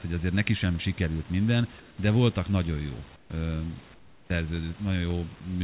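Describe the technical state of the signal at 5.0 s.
At 5.0 s the speech comes through intact, with no fault at that moment, carried on a call path band-limited to 4 kHz over a low room noise about 28 dB below the speech.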